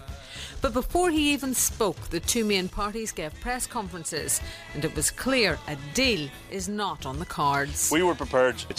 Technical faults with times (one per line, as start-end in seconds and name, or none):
2.70-4.17 one channel drops out
6.52-6.99 one channel drops out